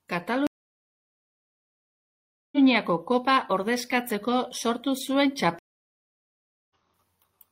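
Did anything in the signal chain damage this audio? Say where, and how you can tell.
Yes. A stream reconnect, at the network stage, occurs twice in this speech. The sound drops out from 0.47 to 2.58 s (about 2.06 s of silence) and again from 5.59 to 6.75 s (about 1.11 s). Each time it resumes further along, roughly two seconds later the first time and under a second the second. The connection broke, the player fell silent, then rejoined the live stream and started a fresh decoder mid-stream.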